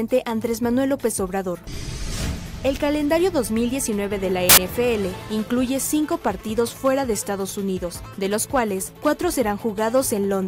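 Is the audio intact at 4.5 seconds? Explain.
No: from 4.49 to 4.57 s, samples built from the wrong bytes turn low bits into loud, harsh broadband noise, a dense waveform block and a broadband spectrogram smear.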